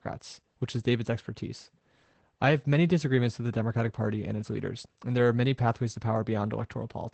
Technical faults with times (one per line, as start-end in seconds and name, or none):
0.00-7.13 Opus voice compression